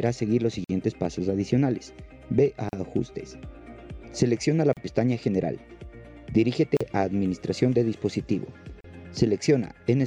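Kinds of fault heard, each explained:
Gap at a join of encoded pieces: the audio was encoded in separate pieces about 2 s long and joined without trimming, so each encoder's start-up delay and last-frame padding remain as short silences. The sound drops out at 0.64, 2.69, 4.73, 6.77 and 8.81 s, for 49 ms the first time and 38 ms after that. Each gap has smeared edges, and the sound then resumes where it stopped.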